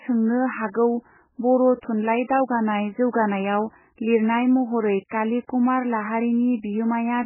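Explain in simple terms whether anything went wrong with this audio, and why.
The speech sounds dull and watery throughout, with nothing above about 3 kHz, so it seems muffled and swirly. The heavy damage is likely from MP3 compression, which gave up the treble and let faint frequency detail flicker on and off to save space.

At 3.11 to 3.13 s, 5.08 to 5.11 s and 5.47 s, a brief hiss comes just before a sharp sound, which then seems smeared. That is pre-echo: the codec spreads noise across a short block of time, so it leaks ahead of the attack.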